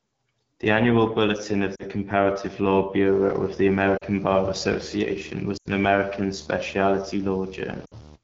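The whole speech clip carries the sound of the AMR wideband (HD Voice) codec. The voice is rough and raspy, which points to one of the codec's two lowest rates, around 8.85 kbit/s. At that rate the pulse-driven vocal tract model cannot track the voice cleanly. The top band, from 6.4 to 7 kHz, is filled with shaped noise rather than real detail. The damage is plainly audible throughout.

Lost AMR speech frames break the voice four times. The decoder repeats the last good pitch and vocal tract settings with falling gain. The first two losses, at 1.76 to 1.86 s and 3.97 to 4.05 s, drop the voice to near silence, with about 40 ms of missing audio each. At 5.57 to 5.69 s the gap is longer, near 80 ms, so the sound drops to near silence. At 7.85 to 7.95 s about 60 ms drops out, and the voice returns weak or rough.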